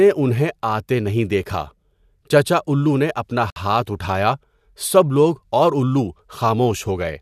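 At 3.50 to 3.56 s, right after "چچا اُلّو نے اپنا", a gap at a join of encoded pieces opens a silence of about 60 ms. Encoder start-up delay and last-frame padding were left in, so the speech stops abruptly, with smeared edges, then resumes at "ہاتھ اُٹھایا سب لوگ".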